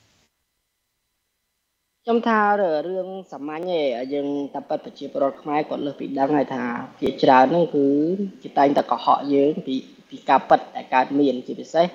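A regular click recurs roughly every 1.72 s from about 0.19 s to 10.5 s, around seven in all, each a brief discontinuity in the sound. These are clock drift buffer slips, likely caused by two devices running on independent clocks that disagree by a few hundred parts per million. The buffer between them gradually drifts until a few dozen samples are dropped or repeated, and the steady spacing reflects that constant drift rate.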